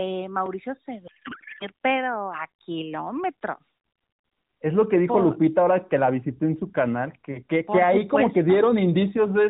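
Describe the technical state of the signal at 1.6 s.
Codec payload misread, 1.08 to 1.67 s: octet-aligned AMR frames unpacked as bandwidth-efficient, scrambling the fields into garbled warbling noise until "pero a kilómetros".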